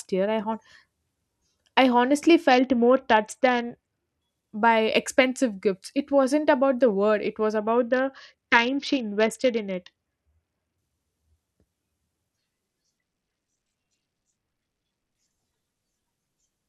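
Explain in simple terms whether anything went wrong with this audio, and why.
Yes, the speech gets dull and gritty three times: after "I honestly" (2.5–4.2 s, clearing by "by expensive gifts"), after "the word it was" (7.57–10.78 s), and at 12.98–15.15 s. That's a Bluetooth SBC bit pool drop: the link struggled, so the phone squeezed the audio harder until it recovered.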